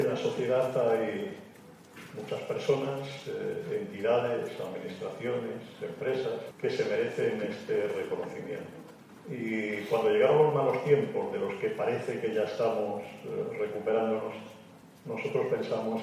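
No technical faults can be heard anywhere in this audio. Nothing in it calls for a timestamp or a repair.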